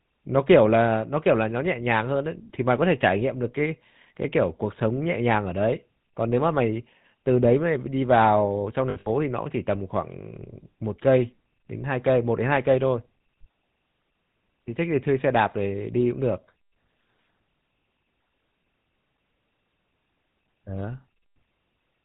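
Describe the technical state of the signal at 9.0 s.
At 9.0 s you're right in the middle of a burst of lost GSM frames running from 8.90 to 9.07 s. About 120 ms of audio drops out, scattered over roughly 160 ms, with the longest gap around 70 ms. The decoder covers each hole by reusing the last good frame's filter and excitation settings, so instead of a clean gap you hear a rough, metallic ringing smear.

All of that sits on top of the GSM full-rate codec, which colours the whole clip and fits a 13 kbps stream. It rebuilds speech from a vocal-tract filter driven by a sparse, regularly spaced pulse excitation that keeps only one sample in three, and nothing above 4 kHz gets through. The damage is plainly audible here: a buzzy, gravelly roughness with a dull top end.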